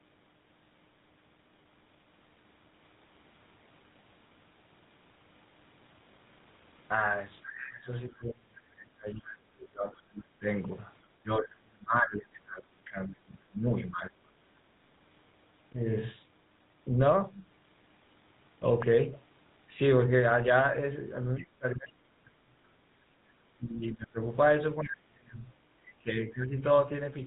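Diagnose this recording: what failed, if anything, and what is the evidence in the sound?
At the codec stage, the speech passed through the GSM full-rate codec at 13 kbps for the whole clip. The codec rebuilds the voice from a vocal-tract filter driven by a sparse, regularly spaced pulse train, so fine detail in the excitation is lost and nothing above 4 kHz survives. The result is plainly audible throughout: a buzzy, gravelly roughness over every phrase and a muffled top end.

In call processing, the speech is suppressed in double talk between 7.48 and 14.57 s, likely because the echo canceller could not tell the local talker apart from loudspeaker echo while both sides were speaking. It responded by pulling the level down hard, around 30 dB at the deepest point. Across about five seconds of that span, the talker dips, dulls or drops out in pieces.

Also in call processing, the other side's voice leaks through in four places. 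The first, at 8.13 to 8.17 s, is a tiny scrap about 40 dB below the speech. The longer stretches at 9.18 to 10.02 s and 21.37 to 21.91 s sit about 20 dB down. A brief fragment at 25.86 to 25.92 s is about 25 dB down. Each one is likely residual loudspeaker sound that the canceller failed to subtract from the microphone signal, so a faint second voice comes through underneath.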